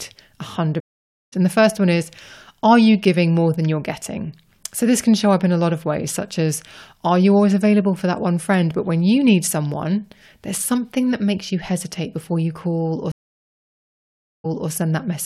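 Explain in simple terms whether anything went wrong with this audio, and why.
The connection to the audio stream dropped twice, and each time the player had to reconnect and restart partway through. This is a stream reconnect. At 0.80 s the speech cuts to about half a second of silence, then resumes around 0.7 s further on, so a piece is skipped. At 13.12 s, just after "you hesitate before you", there is about 1.3 s of silence, and the speech resumes about a quarter second earlier than where it stopped, repeating that bit.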